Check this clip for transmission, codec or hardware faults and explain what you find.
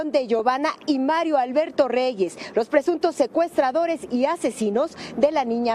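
No transmission, codec or hardware fault can be heard anywhere in the clip. The audio runs without any break, glitch or change in its character that would point to a problem in the chain.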